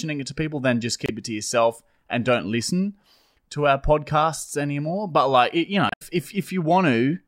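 Damaged data in a compressed stream affects this speech clip at 1.06 to 1.10 s and 5.89 to 6.02 s, where brief glitches break through. Corrupted bytes make the decoder misread frames, lose sync and hunt for the next valid frame header.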